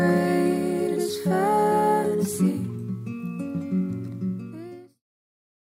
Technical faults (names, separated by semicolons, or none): none